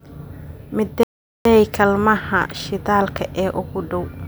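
At 1.03 s the speech cuts to silence for about 420 ms, resuming at 1.45 s. This is a playback stall: the player likely ran short of data or had its output thread blocked, so nothing reached the output until it recovered.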